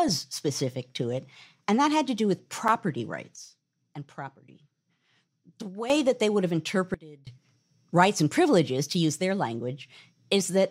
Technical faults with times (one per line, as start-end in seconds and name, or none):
2.68 block of digital silence
3.36-5.90 sudden gain jump
6.94-7.27 sudden gain jump